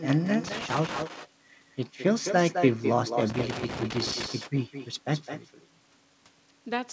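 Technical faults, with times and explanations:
throughout: echo with no canceller. Every phrase is followed about a fifth of a second later by a copy roughly 9 dB quieter and thinner, as the far end's loudspeaker feeds its microphone and nothing removes it. Unlike room reverb, it is one distinct repeat of the speech, not a smooth decaying tail.
0.44–1.04 s and 3.30–4.26 s: loose connector crackle. Two irregular bursts of crackle and scratching break up the speech while a worn or dirty contact makes and breaks the line. The timing is ragged, not the steady ticking of clock or buffer faults, and each burst ends once the contact settles. The call path's G.722 codec leaves nothing above 8 kHz.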